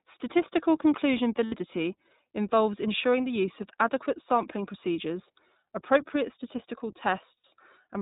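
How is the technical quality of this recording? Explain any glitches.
The technical quality is limited. The whole recording has a narrowband, slightly rough and synthetic character, and it is interrupted twice by brief held, buzzy sounds.

Throughout the clip the speech has no content above 4 kHz. It sounds dull and boxy, with a grainy, processed edge that is plainly audible. This is the iLBC codec, a narrowband VoIP coder. It codes each short frame's excitation independently and, being narrowband, discards the upper band, and its coding roughens the voice. The character fits its 15.2 kbps mode with 20 ms frames.

Lost iLBC frames cause two short dropouts, from 1.46 to 1.54 s and from 7.39 to 7.44 s. The second comes right after "sampling procedures appropriate statistical". Each time, the speech briefly turns into a sustained, breathy vowel-like buzz, and then clean speech resumes almost immediately. 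About 60 ms of audio went missing each time, which suggests three consecutive 20 ms packets. The decoder filled each gap by repeating the last pitch cycle blended with noise. Recovery is quick because every iLBC frame decodes on its own.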